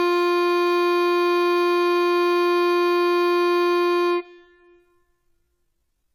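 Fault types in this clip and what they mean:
Generation loss: The music sounds swirly and hollow throughout, with a smeared, watery top end and blurred attacks. That is more damage than a single lossy encode would leave. The likely cause is repeated decoding and re-encoding, around seven passes, with each pass quantising on a shifted frame grid so holes and noise pile up. The character fits AAC-LC at around 96 kbit/s.
Time-stretched section: From 2.40 s to the end the pace drops suddenly to about 0.69 times the original speed while the pitch holds steady. The slowed passage drags. The likely cause is software lengthening that part of the audio to fill a set duration, repeating short fragments to keep the pitch from falling.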